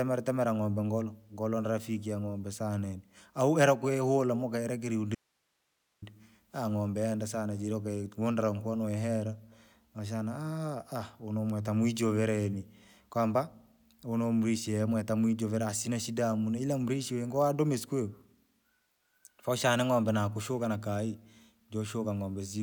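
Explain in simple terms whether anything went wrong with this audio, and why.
Something did go wrong: an audio dropout to a faint residue between 5.15 and 6.02 s. For just under a second the speech disappears abruptly, mid-flow, and all that remains is a very faint hiss. A natural pause would not cut off this sharply. The likely cause is a brief loss of the incoming signal while the recording chain itself stayed switched on, so it kept capturing its own background noise until the speech returned.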